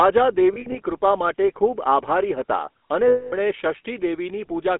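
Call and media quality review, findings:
GSM full-rate codec, throughout: buzzy, gravelly roughness on all speech, band held to about 250 Hz–3.4 kHz, which fits a 13 kbps GSM full-rate path. The regular-pulse excitation sets it apart from plain band-limiting, which would only muffle the sound.

Lost GSM frames, 0.54–0.78 s, just before "કૃપા માટે ખૂબ આભારી": scattered losses, about 100 ms within 200 ms, longest run roughly 70 ms. At 3.08–3.33 s there is a 240 ms loss. The decoder repeats the last good frame, so the sound holds as a metallic ring. A silent gap would instead point to a plain dropout.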